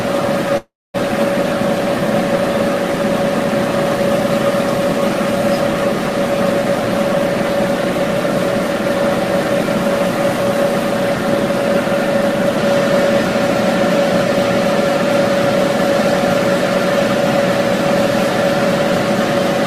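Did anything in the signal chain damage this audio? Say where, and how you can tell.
Yes, a call audio freeze at 0.57–0.96 s. The last sound is drawn out and fades to silence, then resumes. Likely a network stall draining the jitter buffer.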